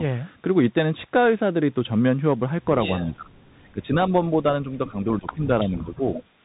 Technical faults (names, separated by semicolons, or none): Bluetooth CVSD headset codec; speech suppressed in double talk; echo leak